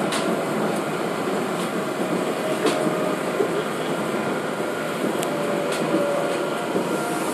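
No technical faults can be heard anywhere in the recording.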